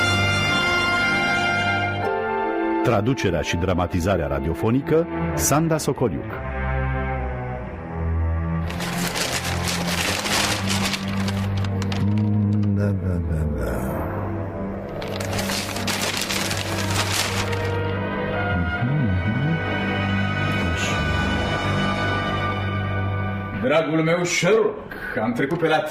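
No technical faults can be heard anywhere in this audio.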